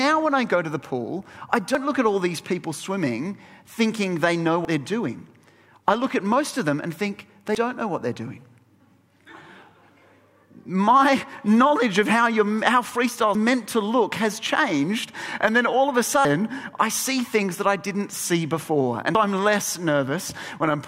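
At 1.75, 4.65, 7.55, 10.45, 13.35, 16.25 and 19.15 s, audio missing between chunks: regular skips, likely from 3 s chunk handoffs, each losing about a tenth of a second, spliced without silence, unlike dropouts.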